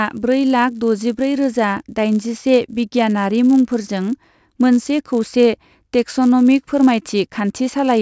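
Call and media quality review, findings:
Resampler restarted on every block: 100 Hz buzz across the speech, gone in pauses, unlike mains hum. Fits per-block 44.1 kHz to 16 kHz conversion on 10 ms blocks.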